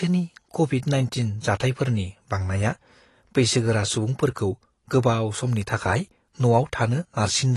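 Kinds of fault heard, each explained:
AAC compression: The speech is dull with nothing above 12 kHz, and sibilants sound smeared and fizzy, likely from AAC-LC coding at a bitrate around 32 kbps.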